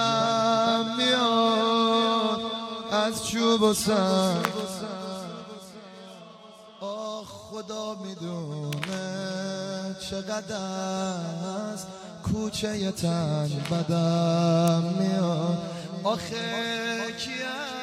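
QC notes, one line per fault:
4.45, 8.73 and 14.68 s: electrical switching spike. Brief sharp snaps sit over the sound, peaking around -5, -15 and -10 dBFS. Likely a nearby switch arcing into the line.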